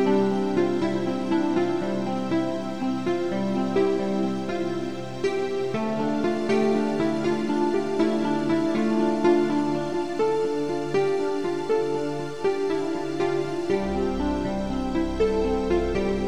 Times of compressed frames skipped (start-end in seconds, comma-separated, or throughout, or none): 3.75